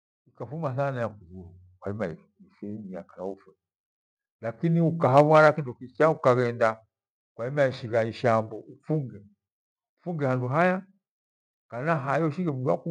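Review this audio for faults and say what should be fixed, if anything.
From 4.95 s to 6.55 s the speech and its background sink together by about 3 dB, a case of automatic gain falling: the automatic gain control judged the input too loud or its background too strong and eased its gain down over that 1.6 s span. Disabling AGC and setting a fixed, conservative input gain would prevent it.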